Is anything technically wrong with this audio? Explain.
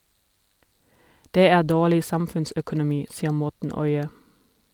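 No, nothing technically wrong turns up anywhere in this recording, so there's no fault to point to here.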